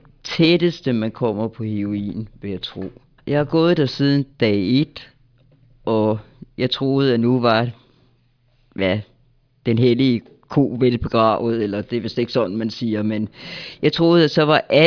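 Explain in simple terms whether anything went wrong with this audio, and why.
Nothing went wrong; the speech plays normally throughout.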